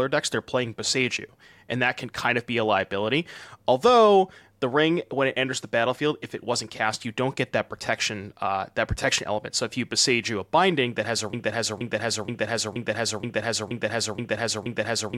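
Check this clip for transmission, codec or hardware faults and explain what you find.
One fault is present. A stalled player, encoder or stream likely caused a broken-record loop from 11.33 s to the end, right after "binding that has a." The last 0.48 s fragment repeats exactly eight times back to back, and the speech that should follow is lost.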